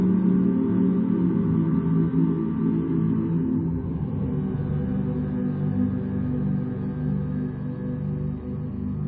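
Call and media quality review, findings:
Wrong sample rate, throughout. Sound runs at one third speed and about 19 semitones low, drawn out and heavy. Playback clock mismatch, no resampling; fits 48 kHz material clocked out at 16 kHz. Probable component: output device or stream rate negotiation.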